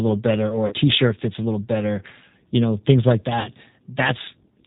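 Throughout, the speech carries plainly audible G.729 codec damage. The band stops at 4 kHz, and the sound is rough and slightly synthetic because each 10 ms frame is rebuilt from a filter, a pitch predictor and a few pulses at 8 kbit/s, unlike the smeared, watery artefacts of transform codecs.

At 0.67 to 0.74 s and again at 3.39 to 3.49 s comes VoIP packet loss concealed by the speech codec. About 40 ms and then 50 ms of audio went missing, which fits four and then five lost 10 ms frames. The decoder repeats its last pitch and filter at falling gain, so the sound stretches into a fading buzzy tone or coloured noise, and the speech stays weak briefly afterwards. A plain dropout would instead give silence or a click.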